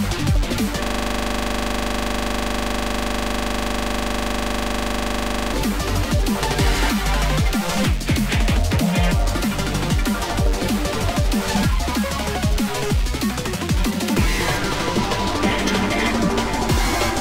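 From 0.84 s to 5.54 s there is a system hang loop. The machine or its audio driver stalled, but the sound hardware kept replaying the same ring buffer. One 40 ms slice of audio repeats exactly, over a hundred times. That gives a loop rate of 25 Hz, which points to a buffer holding about 40 ms of audio. The result is a hard, rattling buzz that pulses 25 times per second, until the audio resumes at 5.54 s.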